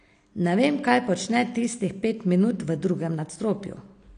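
From start to finish the speech sounds dull and smeared, with a watery, fizzy edge on sibilants and nothing above 9.8 kHz. That's likely AAC compression, with the damage plainly audible, as you'd expect from a low bitrate around 32 kbps.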